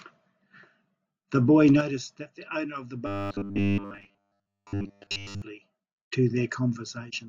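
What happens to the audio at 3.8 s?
At 3.8 s the speech has collapsed into a rigid, metallic buzz pitched at 100 Hz, still loosely tracking the words. This is robotic sound from repeated short buffers, running from 3.07 to 5.42 s. New audio is likely arriving too seldom, so playback keeps looping the last short chunk, while essentially all of the real signal in that span is skipped. A 100 Hz buzz fits chunks about 10 ms long.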